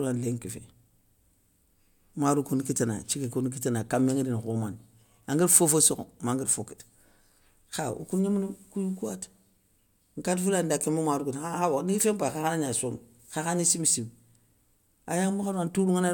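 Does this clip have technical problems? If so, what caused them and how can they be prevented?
No, nothing in this recording needs fixing or preventing.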